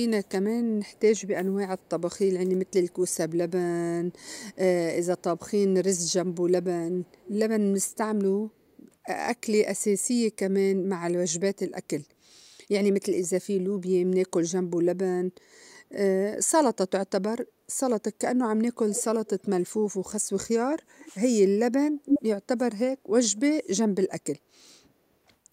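An echo canceller on a loudspeaker end likely let pickup through, producing echo leak: a copy of the speech trailing 301 ms behind. It sits faint at 0.24–3.15 s and 4.18–8.77 s, louder at 18.92–19.48 s, louder than the speech at 22.05–22.21 s, and faint again at 23.31–23.37 s.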